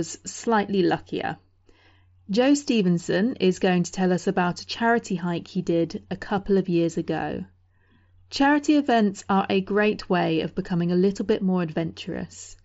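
No technical faults are audible.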